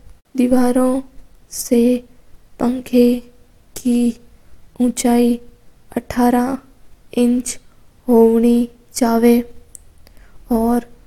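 No technical faults are audible anywhere in the speech.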